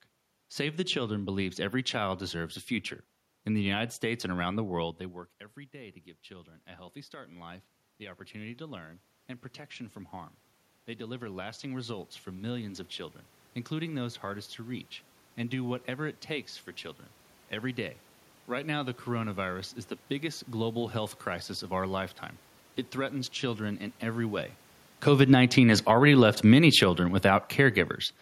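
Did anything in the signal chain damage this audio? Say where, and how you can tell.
Yes. The damage comes from call processing, specifically automatic gain rising. Around 5 s the talker moves and the level at the microphone drops by about 18 dB. From 5.72 s to 20.88 s the level climbs back slowly, by about 16 dB in total. The room noise swells along with the voice, which shows it is a gain change and not the talker returning. Because the gain stops short of the loss, the level ends about 2 dB below where it started.

The second fault is automatic gain falling, at the same processing stage. The talker moves again around 24.5 s. From 25.05 s to 27.85 s the level sinks by about 7 dB. Voice and room noise drop together, so this is the gain control at work. It judged the input too loud, or the background too strong for the gain it had reached, and pulled its gain down over nearly three seconds.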